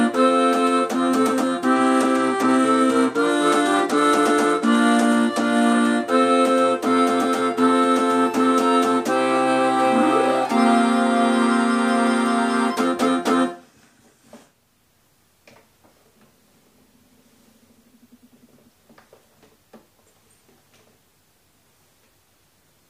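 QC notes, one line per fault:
1.74 to 5.73 s, Bluetooth SBC bit pool drop: for about four seconds the top end goes dull and a gritty, grainy noise creeps in underneath, then clears. That's the link getting congested and the encoder halving its bit budget to keep audio flowing. The highest sub-bands get starved of bits and the rest are quantised coarsely. The amount of dulling fits a drop from bit pool 28 to 14, roughly 108 kbps.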